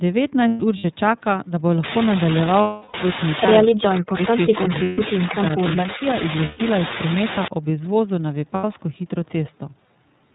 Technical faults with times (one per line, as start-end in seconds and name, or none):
0.00-10.35 iLBC codec
0.48-0.85 lost iLBC frames
1.84-7.48 low bit depth with dither
2.61-2.95 lost iLBC frames
3.62-6.05 speech suppressed in double talk
4.83-4.99 lost iLBC frames
6.45-6.61 lost iLBC frames
8.54-8.65 lost iLBC frames